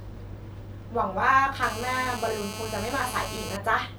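From 1.63 to 3.57 s there's GSM phone buzz: a nearby 2G handset on a call, its 217 Hz bursts rectified into a steady raspy buzz about 10 dB under the speech.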